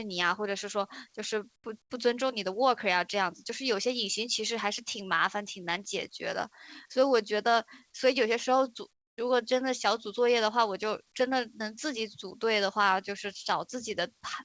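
At 1.56 to 1.64 s and again at 1.82 to 1.90 s, then for a longer stretch from 8.92 to 9.18 s, the quiet background between speech, already about 44 dB below the loud parts, gets swapped for a flat, featureless hiss. It drops by about 9, 20 and 12 dB respectively. That's comfort noise in place of the background, likely the sender's discontinuous transmission cutting out and the receiver filling in synthetic noise. The audio also has nothing above 8 kHz, which fits G.722 at 64 kbps.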